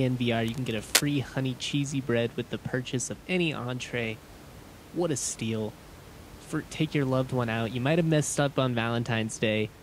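A speech recording with cable scratch noise from 0.48 to 1.12 s, just before "honey cheesy bread with". Dense, uneven scratching rides over the audio at roughly speech level. A worn cable or connector being moved, with its contact resistance jumping about, is the likely cause.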